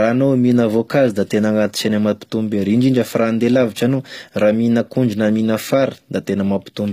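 Speech, with plainly audible damage throughout: treble above the crossover sounds synthetic, s sounds turn gritty and lispy, and nothing remains above 15.4 kHz, likely from HE-AAC compression at a low bitrate near 24 kbps.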